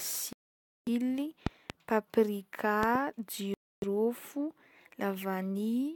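A Bluetooth stall at 0.33 to 0.88 s cuts the speech to about half a second of silence before it resumes, likely because interference delayed packets and the headphone buffer ran dry. A loud pop at 1.47 to 1.72 s is a pair of sharp clicks about 15 dB above the speech, likely a voltage pulse added to the signal. Another double loud pop at 2.83 to 2.97 s jumps about 20 dB above the speech, again likely a voltage pulse. A second Bluetooth stall at 3.54 to 3.84 s drops out for about 0.28 s, likely another buffer underrun waiting on resent packets.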